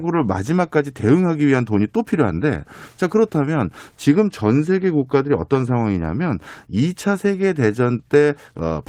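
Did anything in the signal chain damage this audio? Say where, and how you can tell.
No, nothing in the signal chain damaged this audio, and there is no stage to point to.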